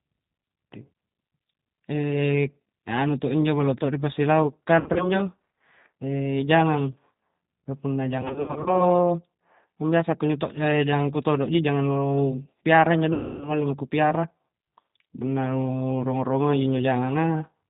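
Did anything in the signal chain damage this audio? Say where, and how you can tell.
Yes. G.729 codec damage runs throughout: an 8 kbit/s vocal-tract model with no content above 4 kHz leaves this speech dull, rough and slightly synthetic.

VoIP packet loss concealed by the speech codec, a network fault, appears at 4.80–5.12 s, 8.22–8.86 s after "ka punna", and 13.1–13.5 s. Losses total 120, 220 and 280 ms. The decoder stretches its last pitch and filter into a fading buzzy tone or coloured noise, and the speech stays weak or distorted afterwards.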